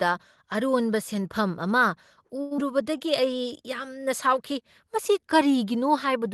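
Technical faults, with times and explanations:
2.41–2.53 s, short stall from a late packet: a packet arrived late and the jitter buffer ran dry, so the receiver held the last sound for about 95 ms, then resumed where it left off. Nothing is lost, but the sound drags audibly and the delay grows by 95 ms.
2.57–2.60 s, skip ahead: a short stretch, roughly 70 ms, was discarded while later audio sat waiting, and the two sides are joined with only about 10 ms of fill. The result is an abrupt forward jump that trims the delay by around 50 ms.
2.70–3.26 s, jitter buffer slow-down: with its reserve running low or its target delay just raised, the buffer repeated single pitch periods and small pieces of pauses, adding 59 ms in total. Playback runs at about 90% speed with unchanged pitch, so sounds are drawn out.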